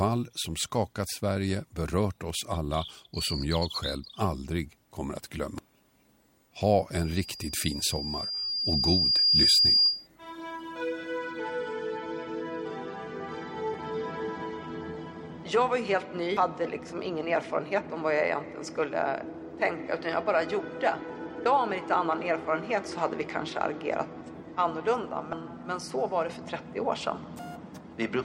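At 5.58 s a brief blip marks damaged data in the compressed stream. Corrupted bytes in a frame leave the decoder with invalid data, so it misreads that frame, loses sync and produces a short burst of garbage while it searches for the next valid frame header.

From 6.92 s to 10.07 s a loudspeaker feedback squeal takes over. A microphone is picking up the loudspeaker it feeds, and at 4.8 kHz the loop gain exceeds one. That tone grows on itself over roughly two seconds into a piercing whistle that peaks at about 10 dB above the programme and holds until it stops just after 10 s.

The stream damage returns at 13.74 s and 16.37 s as the same momentary blips. At 21.42–21.46 s and 25.30–25.33 s it appears as slightly longer glitches, each about 36 ms.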